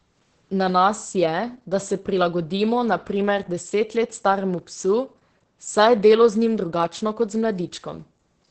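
Heavy Opus voice compression runs throughout the speech. Nothing remains above 8.6 kHz. Coarse SILK coding makes it muffled, hoarse and slightly robotic, which fits roughly 10 kbps.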